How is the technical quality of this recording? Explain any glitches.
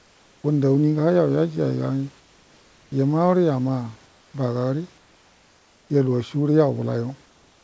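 The pauses in this speech have their background replaced by comfort noise in five places: 0.00–0.44 s, 2.20–2.92 s, 4.06–4.34 s, 4.98–5.90 s and 7.26 s to the end. The sender likely stopped transmitting during silence, and the receiver filled each gap with synthetic noise. That noise is steady, featureless and about 2 to 3 dB quieter than the room background, which sits roughly 35 dB below the loudest speech. On a spectrogram these stretches show a smooth, uniform haze without the room's texture, and the waveform shows a slightly thinner noise floor.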